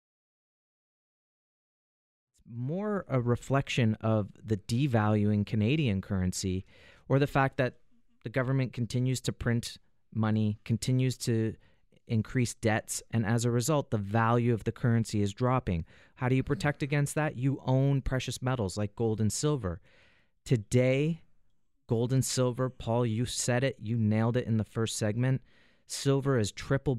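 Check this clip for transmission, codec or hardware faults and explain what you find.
Nothing stood out on listening; the only notable change is a smooth fade-in, rising gently from around two and a half seconds to full level by 3.25 s, just as an editor would shape it.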